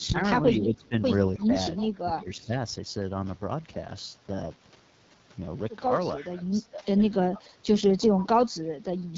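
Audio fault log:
throughout: AMR wideband (HD Voice) codec. The speech has a plainly rough, raspy grain, with nothing above about 7.4 kHz. The top band sounds hissy rather than detailed, as if filled in with shaped noise. That texture fits AMR-WB running at its second-lowest mode, 8.85 kbit/s. At that rate the pulse-based model of the vocal tract has too few bits to describe each sound, so the fine structure turns coarse. Clarity suffers noticeably compared with the higher modes.
0.00–1.02 s, 1.35–1.52 s, 1.83–2.56 s, 6.18–7.01 s, 7.30–7.71 s, 8.09–9.02 s: speech suppressed in double talk. In each span the talker's level sags in pieces, by around 15 to 20 dB at the deepest. The sound thins and partly cuts out, for up to roughly 0.7 s in the longer spans. The likely cause is an echo canceller that heard the far side speaking at the same time. It could not tell that talker's own speech from loudspeaker echo, so it pulled the outgoing signal down.
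1.76–1.85 s: echo leak. A faint, brief copy of the speech trails the original by about 0.32 s, roughly 20 dB below it. It is short and scrappy rather than a full repeat. This likely comes from a loudspeaker at one end whose echo canceller left some of the microphone pickup unremoved. That residue was sent back down the line and arrives noticeably late.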